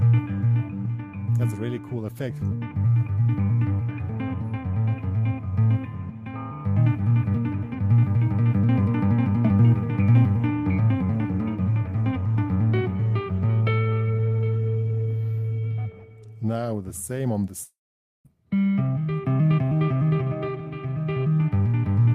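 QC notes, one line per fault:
17.63–18.27 s, long network dropout. The sound breaks off and the last moment carries on as a buzz that fades out. Silence follows for about half a second. Audio resumes at 18.27 s, but around 0.62 s of material is missing, so the sound jumps ahead. The likely cause is a stall in the incoming stream. The receiver extended the last sound to cover the gap, then fell silent until data returned.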